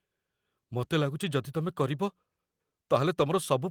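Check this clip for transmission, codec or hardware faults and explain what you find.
No transmission, codec or hardware faults are audible anywhere in the speech.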